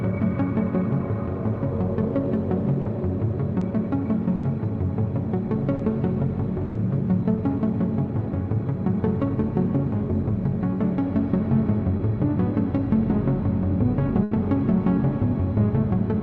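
At 2.81 to 2.87 s there's the first short concealed packet loss, then more at 3.59 to 3.63 s, 5.75 to 5.81 s and 11.97 to 12.01 s. Each time, 20 to 40 ms of audio didn't reach the decoder in time. The receiver papered over the hole by carrying the last bit of sound forward, as pitch or as shaped noise, then blended back in. You hear a quick smear or wobble, and anything very brief in that spot can just disappear.

The bigger ones are bursts of packet loss at 4.35 to 4.45 s, 6.65 to 6.77 s and 14.23 to 14.33 s, with 80 ms, 100 ms and 80 ms gone. Here the concealment had to stretch the last sound much further and fade it as it went, so you get a held buzz or a hiss that dies away. Then the audio jumps ahead with that stretch missing. The top end tops out around 12 kHz throughout, which fits an Opus call path running at about 32 kbps.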